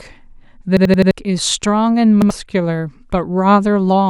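At 0.77 s the speech hits a repeated buffer. Fresh audio didn't reach the output in time, so the device kept replaying the last 85 ms slice, four more times through to 1.11 s, with a hard seam at every restart. That slice length fits a 4096-sample buffer. You hear a choppy stutter and lose around 300 ms of speech. At 2.22 s it happens again with one extra play, ending at 2.30 s and dropping roughly a tenth of a second.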